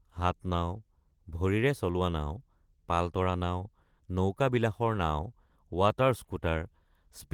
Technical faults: none

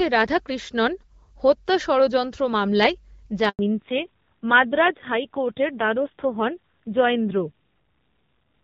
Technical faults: handover gap; fallback to narrowband

